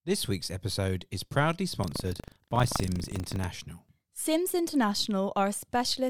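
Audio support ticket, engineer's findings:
Buffer tearing, 1.80–3.44 s: robotic 25 Hz rattle on the speech. Writer and hardware read pointer crossing each period, which fits a 40 ms buffer; about a tenth of each holds audio roughly 150 ms stale, hard-spliced.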